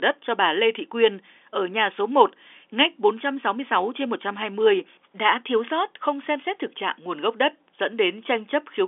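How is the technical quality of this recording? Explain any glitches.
No glitches are audible anywhere in this recording.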